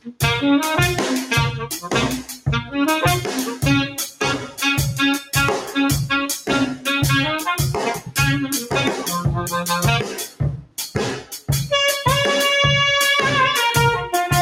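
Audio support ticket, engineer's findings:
Noise suppressor applied to music or sounds, whole clip. Level swings by a few dB. A speech-oriented suppressor left in the chain is classing sustained tones, ambience and reverb as noise. Transients pass largely intact while held material and decays get pulled down, so the sound pumps and thins with the gain riding. Probable component: the noise suppression stage. Fix by bypassing it or switching to a music mode.

Sound cut by the noise suppressor at 0.00–0.22 s, 2.22–2.47 s, 3.90–4.22 s, 4.38–4.60 s, 7.98–8.15 s, 10.05–10.41 s, 10.57–10.78 s and 11.19–11.49 s. Short dips, each a fraction of a second, deepest about 17 dB at 0.00 s, 10.05 s and 10.57 s and about 11 to 14 dB elsewhere. Same suppressor misjudging these passages as noise. It ducks steady or fading content hardest and truncates tails.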